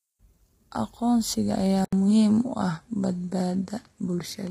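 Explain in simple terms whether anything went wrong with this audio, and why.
Throughout the recording, the speech was likely squeezed by low-delay AAC compression, the fast codec used for video calls. It was squeezed hard, so the voice sounds rough and grainy, with hiss between its tones and a thin, artificial-sounding top end.

At 1.85 s, the input switched to a poorer device, likely a different microphone or headset. After a brief gap of about 80 ms, the sound loses everything above 11.8 kHz and gains a faint new background noise, though its loudness stays the same.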